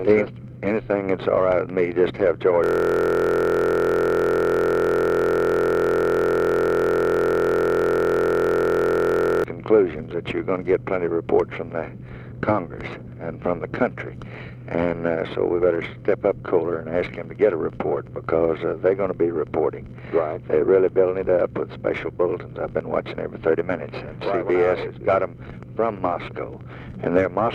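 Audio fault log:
2.64–9.44 s, system hang loop: The audio freezes into one tiny fragment repeated exactly, nearly 300 times. Each repeat lasts 23.22 ms, which fits a 1024-sample buffer. The playback hardware kept cycling through that same buffer while the computer or driver stopped supplying new data. Because the loop is so short, the repeats fuse into a steady buzz at 43.1 Hz rather than a stutter. Normal sound resumes at 9.44 s.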